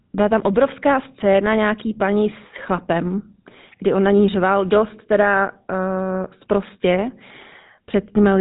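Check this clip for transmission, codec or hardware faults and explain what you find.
One codec fault runs through the whole recording.

GSM full-rate codec, present from start to finish: the speech has been through the original GSM coder, which models the vocal tract as a filter and drives it with a sparse, regularly spaced pulse excitation, keeping only a fraction of the excitation samples, which fits a 13 kbps rate. Nothing survives above 3.8 kHz, so the speech sounds dull and band-limited, and the coarse excitation gives it a plainly audible buzzy, gravelly roughness.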